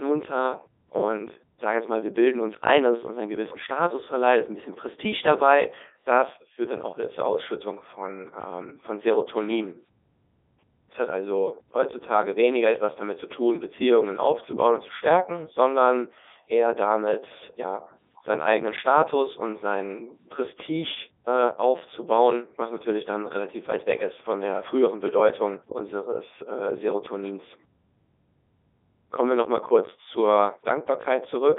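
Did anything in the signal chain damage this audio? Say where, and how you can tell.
Yes. The damage happened at the codec stage, and it runs for the whole clip: the speech has passed through a Codec 2 vocoder. The decoder rebuilds the voice from sine waves guided by pitch, voicing, energy and a spectral envelope, so the real waveform is gone. You can hear it as heavy robotic buzz, with the band squeezed to roughly 250 Hz to 3.7 kHz and nothing above 3.8 kHz. That sound fits Codec 2's highest 3.2 kbit/s mode.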